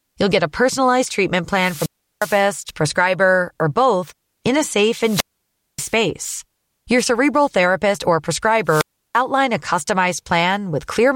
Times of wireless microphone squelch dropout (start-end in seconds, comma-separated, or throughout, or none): 1.51-2.50, 4.98-5.97, 8.65-9.20